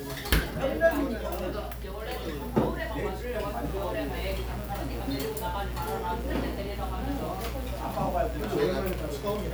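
Mains buzz runs from 3.62 s to the end, a steady, raspy buzz sitting about 15 dB below the sound. Sharp switching spikes from a dimmer, rectifier or unshielded line enter twice per 60 Hz cycle, spraying harmonics up to several kHz.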